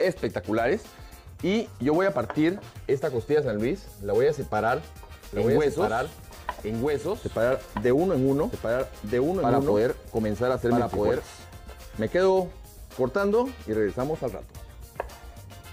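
From 5.33 s to 11.25 s a doubled audio track appears: a second full-band copy of the sound trails by about one and a half seconds at roughly equal level, dry, and starts and stops abruptly, likely from a slower second capture path.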